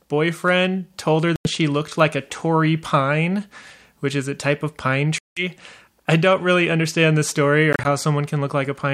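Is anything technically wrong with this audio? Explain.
Yes. The speech drops out three times, most likely because of a Bluetooth dropout, where audio packets reach the headphones too late, are discarded, and the output goes silent until good packets return. The first gap runs from 1.36 to 1.48 s, after "told her". The second and longest, from 5.18 to 5.43 s, follows "a type of pine". At 7.73 to 7.86 s, after "really understand the story", short silences of up to about 30 ms are scattered. Each time the speech resumes further along, as if it had kept playing.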